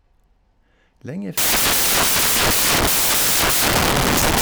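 From 1.38 s to the end, the speech turns into samples built from the wrong bytes: each sample's bytes are combined in the wrong order or alignment, so the rapidly changing low bits dominate. This produces loud, harsh broadband noise, which shows as a full-height spectrogram band and a dense waveform block.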